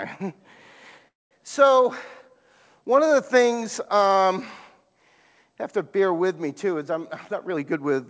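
A speech recording carried over a call link, audible in its band stopping at 8 kHz, which fits a G.722 wideband codec at 64 kbps, with two timing faults. From 1.08 to 1.33 s the sound stalls: a brief buzzy continuation decays into about 200 ms of silence before the speech resumes where it left off. This is a call audio freeze, likely from delayed packets draining the jitter buffer, so roughly a quarter second of delay was inserted with nothing lost. From 7.33 to 7.92 s the speech hurries at unchanged pitch, running at about 120% speed. This is a jitter buffer speed-up, where the receiver trimmed around a tenth of a second in small pitch-period slices to cut the excess delay.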